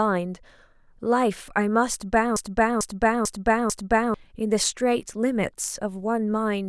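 From 2.36 to 4.14 s a broken-record loop repeats a 0.44 s fragment four times back to back, likely from a stalled stream resending its last buffer. The waveform and spectrogram show identical blocks at even spacing, and the speech that belonged there is lost.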